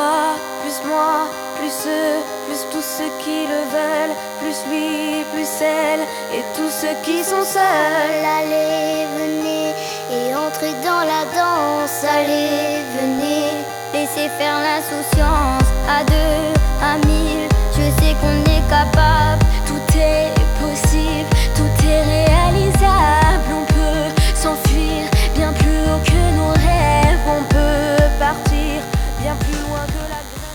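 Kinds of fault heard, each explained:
DECT cordless phone buzz: a nearby DECT handset or base pulses every 10 ms, so a thin 100 Hz buzz rich in harmonics sits quietly under everything.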